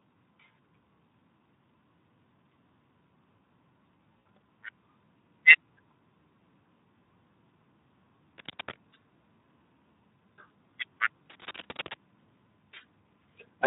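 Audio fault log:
Throughout: Speex codec. The speech sounds hoarse and grainy, with a noisy edge, because the CELP coder has too few bits to model the excitation. The degree of damage points to a low setting, around 11 kbps. Unlike the stop-start of packet loss, this coarseness never lets up.
4.20–4.24 s and 6.64–6.66 s: VoIP packet loss concealed by the speech codec. Each gap is bridged by a short, fading continuation of the preceding sound. The decoder repeats its last pitch and filter at falling gain, and the first gap covers three lost 20 ms frames, 60 ms in all. The speech stays weak briefly afterwards, unlike a clean dropout to silence.
8.38–8.76 s and 11.30–11.97 s: cable scratch noise. Dense, irregular scratchy rustling sits over the speech at about 5 dB below it, likely from a worn cable or connector being moved so its contact resistance flickers. The bursts are ragged and unrelated to the speech, unlike codec buzz.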